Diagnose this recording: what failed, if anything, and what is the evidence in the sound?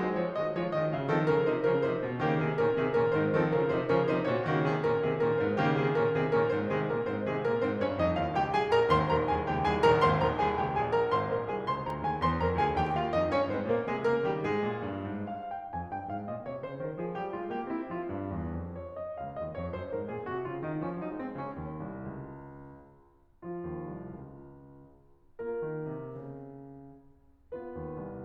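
A single sharp snap at 11.90 s sits on top of the music, fairly quiet at around -35 dBFS. It is likely an electrical switching spike: a nearby switch, motor or static discharge arcing briefly and coupling into the analogue wiring.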